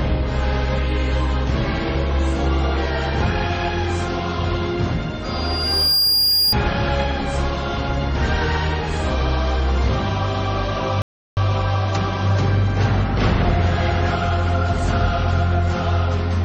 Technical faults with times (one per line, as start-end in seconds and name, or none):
5.24-6.55 loudspeaker feedback squeal
11.02-11.37 audio dropout to silence